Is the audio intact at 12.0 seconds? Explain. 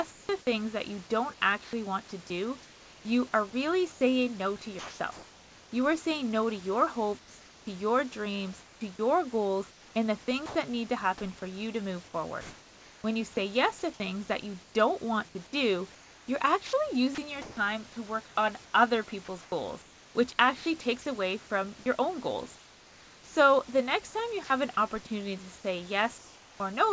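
Yes, the audio is intact at 12.0 seconds, with no dropout, glitch or other fault at that moment.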